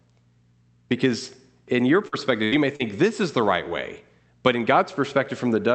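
Right after "in your" there are two dropouts: one from 2.07 to 2.15 s, then a longer one from 2.44 to 2.55 s. Each is a burst of packet loss. The receiver stretched the last sound for about 50 ms and then 74 ms, and the audio picks up later, skipping about 40 ms and then 80 ms.

From 2.76 to 2.83 s, just before "this is the right", there is a brief smear or wobble. This is short concealed packet loss. About 40 ms arrived too late, and the decoder bridged the hole with 38 ms of continued sound before blending back. Beneath all of this runs the usual Opus coding noise of the call path, with its top end capped near 8 kHz.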